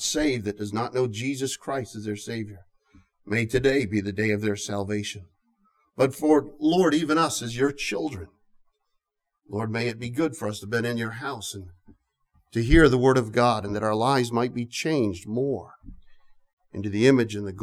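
Up to 12.34 s, channel delay comb filtering: one channel runs about 10 ms late, so mono sum goes hollow, notched from around 50 Hz.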